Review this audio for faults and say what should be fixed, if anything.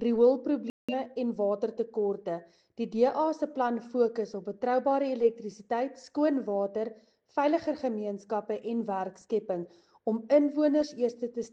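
Corrupt frame muted from 0.69 to 0.94 s. The audio cuts abruptly to silence for about a quarter second, which fits roughly six rejected frames, and then resumes on time. To prevent it, protect the compressed stream with error checking and retransmission so damaged frames never reach the decoder.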